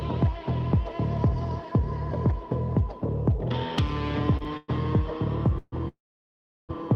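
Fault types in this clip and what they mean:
Short stall from a late packet: At about 4.37 to 4.42 s the sound hangs on itself for roughly 30 ms, a brief smeared hold with a faint buzz or dip, and then carries on from exactly where it paused. Nothing is skipped. A packet arrived after it was due and the jitter buffer ran dry, so the receiver stretched the last bit of sound to cover the wait, adding 30 ms of delay.
Call audio freeze: At 4.57 to 4.70 s, 5.58 to 5.74 s and 5.88 to 6.71 s the audio stops moving and the last sound is drawn out as a fading buzz or hiss. The first lasts 113 ms with no silence, the second 138 ms ending in about 20 ms of quiet, and the third 807 ms, of which about 720 ms is dead air. Each time the sound resumes where it left off. The likely cause is packets held up in transit, emptying the jitter buffer.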